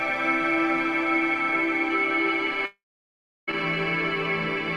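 A long network dropout is the likely cause of the break in this audio from 2.65 s to 3.49 s. The last sound before the gap is carried on briefly as a fading buzz or hiss, then about 0.69 s of silence follows while no data arrives. When the stream resumes at 3.49 s, it picks up further on, skipping about 0.82 s of material that was never played.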